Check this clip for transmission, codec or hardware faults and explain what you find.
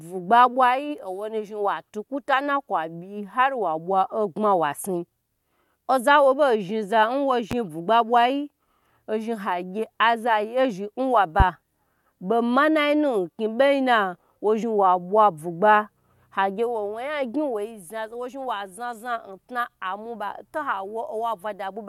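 There are two loud pops in the speech, around 7.51 to 7.55 s and 11.40 to 11.43 s, about 10 and 15 dB above the signal. A voltage spike, likely from a switch, plug or static, gets shaped into a brief thump while the speech carries on underneath.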